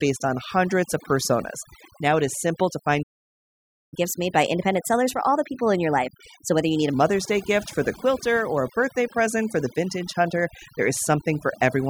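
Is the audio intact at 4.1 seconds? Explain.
No. At 4.1 seconds the speech sits inside a catch-up at higher speed running from 3.94 to 6.94 s. After a stall, the player resamples its backlog to play it 1.15 times faster, so pitch rises along with tempo, here by about two semitones. The voice sounds hurried and slightly chipmunk-like for those three seconds. On a spectrogram, harmonics and formants shift upward across that stretch, and on a waveform syllables are visibly compressed in time.

Overdone noise removal also affects that moment, as it does the whole clip. The noise reduction was set so strong that individual frequency bands near its noise estimate are pushed far down or switched off, taking quieter parts of the voice with them. The background breaks into twinkling, warbling specks, and the voice can come across watery or thin. A spectrogram shows scattered isolated blobs where a smooth noise floor should be, plus gaps in the speech's weaker regions.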